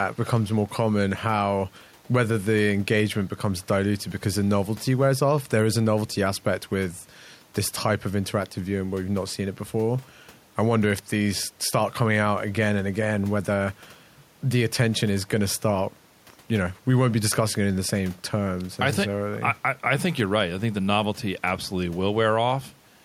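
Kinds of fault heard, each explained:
Nothing stood out on listening to the recording.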